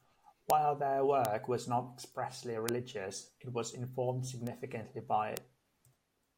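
Five bit error spikes occur at 0.50, 1.25, 2.69, 4.47 and 5.37 s. The one at 1.25 s falls just before "was not expressly". The one at 2.69 s falls just after it, and 4.47 s follows "it was informed". Each is a flipped bit in one or two samples. The value jumps by a power of two and snaps back. Each is heard as a single sharp, broadband tick. Most peak at about -9 dBFS. The one at 4.47 s is softer, at about -21 dBFS.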